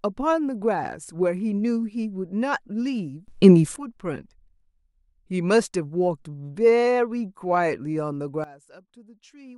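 At 3.28 s the level of the speech and background noise jumps up about 18 dB until 3.76 s; at 8.44 s it drops about 19 dB to the end. Both are sudden gain jumps, likely unramped digital gain changes.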